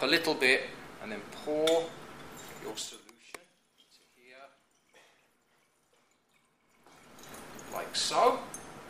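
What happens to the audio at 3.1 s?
At 3.1 s the level is being pulled down in coarse 2 dB jumps, about thirty a second, instead of gliding, so the fade is audible as zipper noise: a run of small ticks from 2.69 s to 3.16 s as the sound drops by roughly 25 dB.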